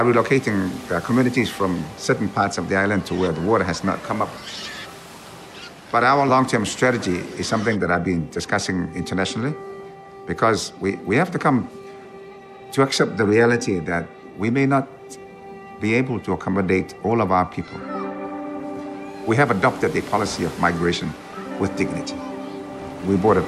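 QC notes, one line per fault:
Nothing stood out on listening to this audio.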